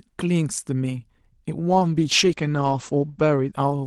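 From 1.69 s to the end, a call bitrate drop sets in. The encoder is starved of bits, which fits a fall from about 40 to 14 kbps, so the speech turns rough and muffled. On a spectrogram, the energy ceiling drops from 12 kHz to 8 kHz.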